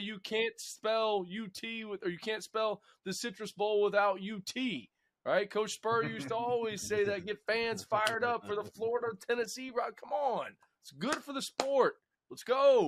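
No technical faults can be heard in this audio.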